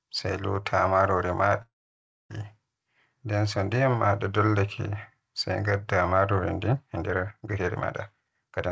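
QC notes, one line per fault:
1.62–2.32 s, long network dropout. The sound breaks off and the gap lasts about 0.7 s. A brief fading buzz trails the last sound, then near-silence holds for most of the gap, roughly 0.6 s. This is likely lost packets that never reached the receiver. The receiver stretched the final sound briefly before giving up. When audio resumes, that stretch of material is simply gone, and the sound jumps ahead.
6.64–8.71 s, time-stretched section. From 6.64 s to the end, the speech suddenly runs faster, about 1.44 times normal pace, while the pitch stays put. It sounds rushed. This is likely software compressing the audio to fit a shorter length. It kept the pitch by dropping short slices. The G.722 call path limits the audio to about 7 kHz.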